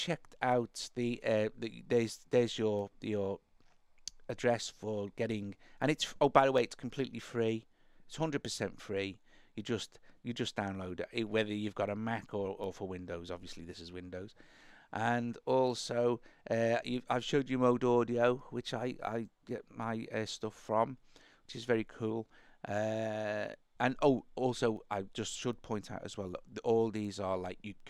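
The audio carries word clock ticks from 0.52 s to 27.80 s. Sharp ticks recur roughly every 0.7 seconds, around forty in all. Each one marks a single sample dropped or repeated. The receiving device was running on its own clock, not locked to the sender's. The two clocks drift apart by around 30 parts per million. Each time they slip past each other, a few samples are misread, giving a steady pattern of ticks.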